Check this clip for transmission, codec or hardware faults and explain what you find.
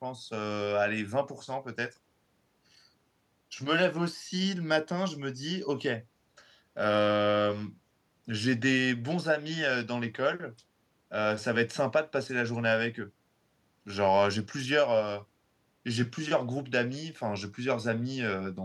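Nothing here points to a transmission, codec or hardware problem; the speech comes across steady and intact the whole way, with nothing that calls for a closer look.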